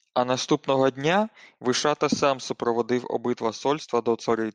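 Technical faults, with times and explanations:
No technical faults can be heard in this speech clip.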